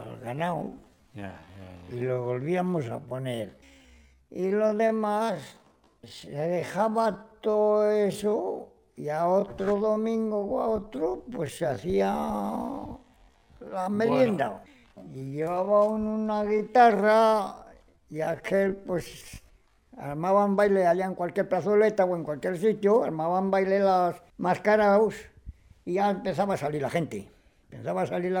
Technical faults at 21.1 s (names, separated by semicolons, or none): none